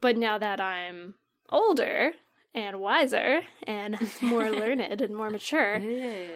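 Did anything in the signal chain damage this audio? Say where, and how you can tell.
No, nothing along the signal chain has left a mark on this speech recording. No stage, from capture through to playback, gives any sign of having altered it.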